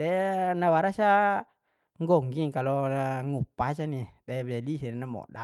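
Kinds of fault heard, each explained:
No technical fault can be heard in the speech, and the signal stays continuous and intact throughout.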